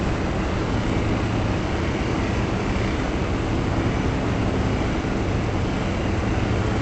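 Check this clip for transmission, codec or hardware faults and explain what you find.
No faults turn up in this clip.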